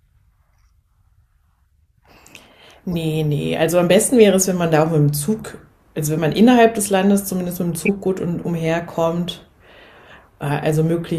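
At 2.90 to 2.94 s the speech is hit by a short corrupt frame decoded, a quick blip peaking around -15 dBFS. Another, smaller one at 6.37 s sits near -20 dBFS. The worst is at 7.81 to 7.89 s, a harsher burst reaching about -5 dBFS. In each case flipped bits in a compressed frame got decoded anyway, so misread gains and codes spray energy into wrong frequencies for roughly a couple of frames, a few more on the last one.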